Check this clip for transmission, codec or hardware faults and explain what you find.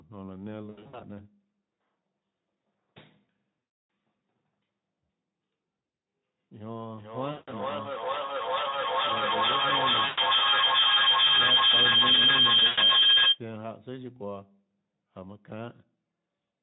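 Two faults are audible: repeated packet loss and a sustained feedback howl.

VoIP packet loss concealed by the speech codec, at 0.69–1.04, 3.59–3.89, 5.77–6.05, 7.31–7.54, 10.05–10.19 and 12.67–12.79 s: the decoder fills missing packets by extrapolating the last pitch and filter. The speech smears into buzzy, fading tones.

Feedback howl, 6.8–13.47 s: two devices share one room and call, so each trip around the loop gains level. A tone around 3 kHz builds to about 15 dB above the speech, pulsing roughly every 0.4 s.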